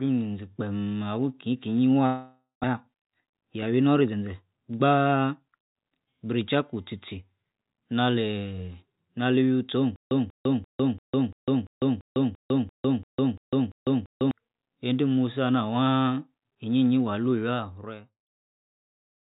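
A jitter buffer that had built up excess audio, as happens after delayed packets arrive together, triggers a jitter buffer speed-up from 2.73 to 4.35 s in this speech recording. Short pitch-period slices, around 150 ms in total, are cut out, so the speech runs at 109% speed with unchanged pitch and sounds hurried. From 9.96 to 14.31 s a stream stall likely causes a stutter with silent gaps: a 190 ms fragment repeats 13 times every 342 ms, separated by 151 ms of digital silence, and the audio that belonged in that span is lost before playback resumes at "ende musi ana". Throughout, the narrowband call codec leaves nothing above 4 kHz, and a smooth fade-out runs from about 17 s to 18.39 s.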